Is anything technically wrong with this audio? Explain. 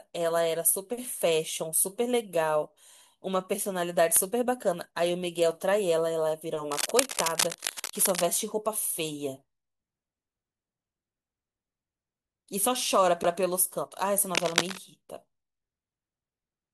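Yes, the speech has two kinds of fault. Cable scratch noise appears from 6.72 to 8.29 s and again from 14.35 to 14.78 s. This is likely a worn cable or connector being moved, so its contact resistance jumps about rapidly. It adds dense, uneven scratching over the speech, a little below the speech level in the first burst and roughly as loud as the speech in the second.

A CD skip occurs at 13.23 s. The laser jumped onto a different turn of the disc's spiral, so playback mutes for around 10 ms and then resumes from another point in the audio.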